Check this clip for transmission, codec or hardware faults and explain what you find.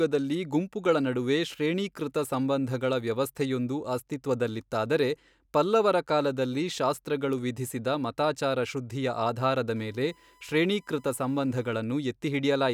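One hardware fault is present, a USB whine between 9.76 and 11.76 s. The USB bus pulls current in regular 1 ms frames, and that pulsing load leaks into the audio path through shared power or ground. The result is a steady 1 kHz whine sitting well below the speech, roughly 35 dB down. Its pitch stays fixed for the full two seconds instead of following the speech.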